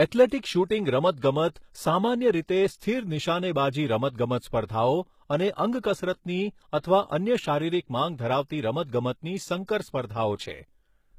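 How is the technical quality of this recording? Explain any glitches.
The recording has plainly audible codec damage throughout. From start to finish, the sibilants and upper treble of the speech sound gritty and lispy, likely from HE-AAC compression at a rate near 20 kbps. The treble is copied upward from lower bands, so it stays bright, reaching 20.6 kHz, rather than being cut off as plain low-bitrate coding would do.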